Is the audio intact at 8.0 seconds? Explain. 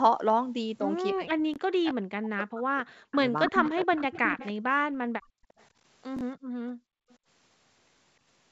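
Yes, the speech at 8.0 seconds is intact, carried cleanly through the call path with its usual band limit at 8 kHz.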